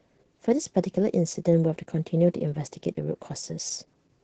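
Opus voice compression affects the speech throughout. The band stops near 8 kHz, so the top end is missing. The coarse excitation makes the voice sound muffled, hoarse and slightly robotic. The heavy damage fits SILK coding at around 10 kbps.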